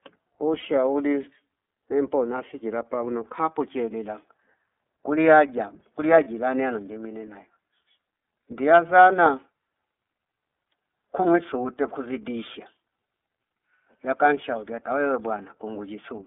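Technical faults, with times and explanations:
Throughout: iLBC codec. The speech sits in a telephone band, roughly 250 Hz to 3.5 kHz, so it's thin at the bottom with no air on top. The coding damage is plainly audible, a slightly rough, synthetic edge on the voice, because each block of excitation is rebuilt on its own rather than smoothed from the one before. The texture fits the 30 ms framing of the 13.33 kbps mode.
0.59 s and 6.24 s: lost iLBC frames. Each is a short dropout, about 30 ms, which fits a single missing frame. The decoder fills it by repeating the last pitch cycle with some noise mixed in, so instead of silence you get a brief held, faintly buzzy vowel-like smear. Since iLBC frames don't depend on their neighbours, the speech snaps back cleanly right after each gap.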